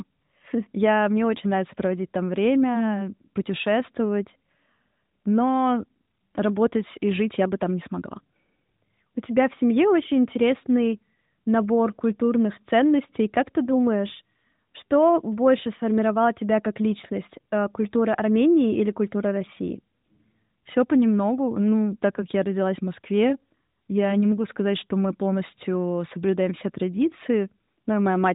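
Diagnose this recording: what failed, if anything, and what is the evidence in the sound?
Nothing failed here: the speech comes through the narrowband mobile codec as expected, with its usual phone-style top end stopping around 3.8 kHz and no fault anywhere along the chain.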